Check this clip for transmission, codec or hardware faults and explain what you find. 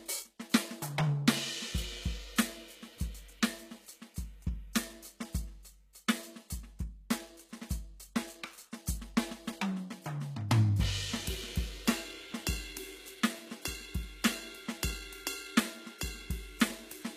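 There's one codec fault running through the whole piece of music: HE-AAC compression, likely at a very low bitrate, with damage you can plainly hear. The treble is synthetic. The encoder has coded the lower spectrum properly and then rebuilt the top by copying lower bands upward under a coarse envelope. Those copied harmonics don't line up with the real ones, so cymbals and sibilant detail come out gritty and metallic, and nothing at all survives above about 14.9 kHz.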